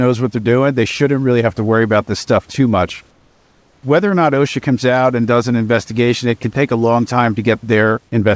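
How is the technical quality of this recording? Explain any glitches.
There's one glitch worth flagging, heard against a call-codec sound with nothing above 8 kHz, which fits G.722 at 64 kbps. From 3.11 to 3.83 s the room background gives way to smooth, featureless hiss about 4 dB quieter, likely comfort noise in place of the background during a transmission pause.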